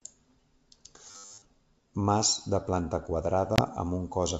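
Robotic sound from repeated short buffers, 1.11 to 1.5 s: a rigid metallic buzz at 100 Hz, likely from audio arriving too late and a repeated 10 ms buffer covering most of that stretch. Packet loss on an ADPCM call, 3.56 to 3.61 s: a 20 ms hard-edged silence, about one packet, after which the G.722 decoder's predictor briefly mistracks, causing slight distortion as the sound resumes.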